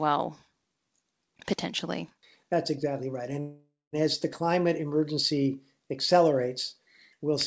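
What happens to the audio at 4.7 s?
Nothing goes wrong at 4.7 s: the speech carries on intact through that moment, with only the steady 8 kHz top end of the call codec it passed through.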